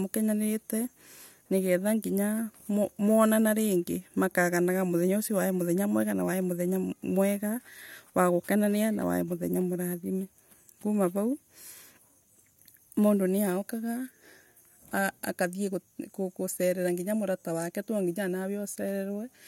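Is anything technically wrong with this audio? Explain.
No, nothing technically wrong is audible anywhere in this speech recording.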